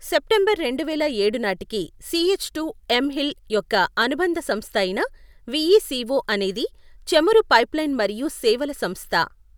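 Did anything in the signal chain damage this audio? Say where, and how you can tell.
No, nothing stood out on listening to this speech that would point to damage at any stage of the signal chain.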